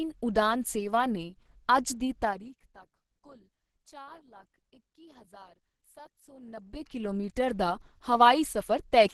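Opus compression runs through the whole recording. Nothing reaches above about 12.2 kHz, and the speech has the muffled, hoarse quality of the codec's hybrid mode, which it switches to when bits are scarce. Here the encoder keeps the overall band energies but has too few bits for fine detail. The heavy damage likely comes from a low rate, consistent with about 12 kbps.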